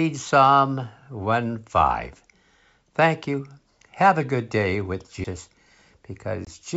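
At 5.24 s, just after "a good day with", a tick and an abrupt jump in the speech mark a CD skip: the laser leapt to another track turn after a brief mute.

From 6.45 to 6.47 s, a hard-edged 20 ms hole, then slight distortion, is packet loss on an ADPCM call: a single lost packet desynchronised the decoder's predictor.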